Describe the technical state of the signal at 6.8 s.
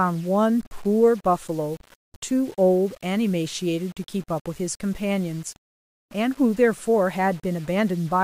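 Low bit depth without dither is present at 6.8 s, as it is across the whole clip. The speech sounds as if it was most likely stored with only about 7 bits and rounded to the nearest step with no dither noise added first. That rounding error tracks the signal instead of forming a steady hiss, sitting roughly 30 dB below it. Quieter syllables take on a grainy, gritty distortion that shifts with the speech, and the softest tails sputter or drop toward silence.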